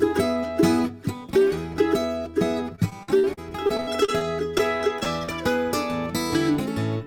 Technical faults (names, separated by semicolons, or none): repeated packet loss (robotic sound)